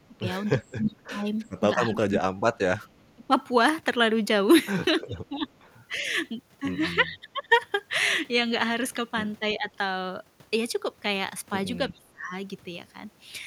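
Speech suppressed in double talk, 0.06 to 3.33 s: the voice dips and breaks up for about two seconds in total, falling by up to about 35 dB, likely because the echo canceller turned both sides down while the far end spoke at the same time. Echo leak, 0.65 to 0.75 s and 1.45 to 1.5 s: brief faint scraps of the voice return 333 ms late, about 30 to 35 dB down, likely residual loudspeaker pickup that the far end's canceller failed to remove. Echo leak again, 5.03 to 5.67 s, with the same 333 ms delay at about 35 dB down. Speech suppressed in double talk recurs at 5.06 to 6.03 s (up to about 25 dB), 7.03 to 7.52 s (about 15 dB), 9.57 to 9.68 s (about 10 dB) and 11.9 to 12.33 s (about 25 dB), each heard as the voice briefly sinking or cutting out.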